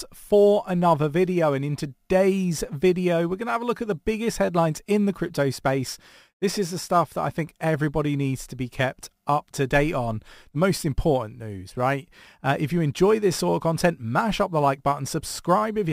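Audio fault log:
throughout, crude rate conversion: faint gritty, inharmonic fizz about 30 dB below the speech from unfiltered sample repetition, consistent with a 44.1 kHz to 48 kHz conversion.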